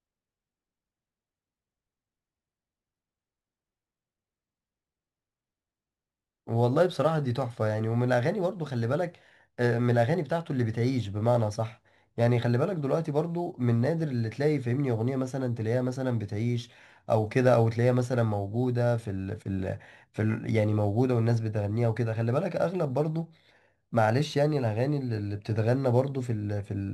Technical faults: imaging from sample-and-hold upsampling

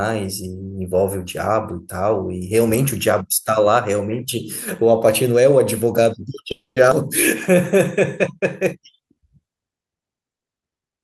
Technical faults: call audio freeze; skip ahead; jitter buffer slow-down

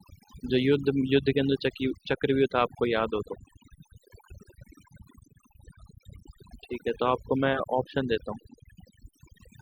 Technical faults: overdone noise removal

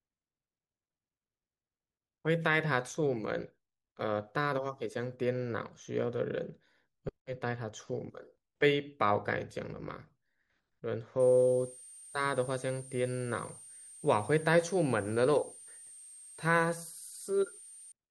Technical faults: switching supply whistle

